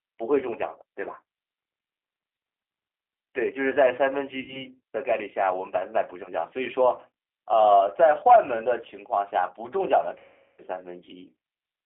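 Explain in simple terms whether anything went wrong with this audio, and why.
The whole recording has a thin, slightly rough and artificial quality, like a phone call over the internet. That comes from the G.729 codec, a speech squeezer used in internet calling. Instead of sending the actual sound, it sends a rough recipe for the voice and rebuilds speech from it at the other end. Anything above about 3.4 kHz is gone, so the sound lacks brightness and has a faintly synthetic edge.

At 4.40 to 4.64 s, and again at 10.18 to 10.62 s, the speech smears into a buzzy tone or a coloured noise that fades away and then takes a moment to recover. This is VoIP packet loss concealed by the speech codec. Chunks of the call never arrived, 80 ms in the first gap and 400 ms in the second. The decoder guessed the missing sound by stretching the last bit it had and letting it die down. The second gap is much longer.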